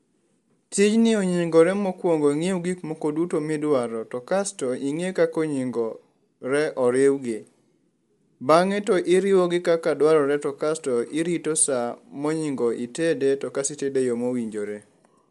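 Speech throughout carries plainly audible Bluetooth LC3 compression artefacts: a grainy, breathy edge and nothing above 11.6 kHz, likely from LC3 encoding at around 48 kbps.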